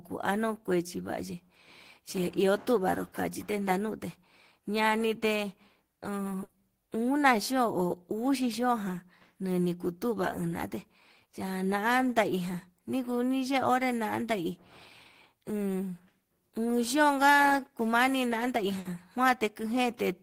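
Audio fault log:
6.43–6.52 s and 18.79–18.88 s, burst of packet loss: In each case a short run of consecutive packets never reached the receiver in time. The decoder bridged the hole by extending the last speech it had and fading it, giving roughly 60 ms of held buzz or decaying hiss. It then picked up later in the stream, so about 60 ms of speech is simply skipped, heard as a brief smeared stall followed by a small jump forward.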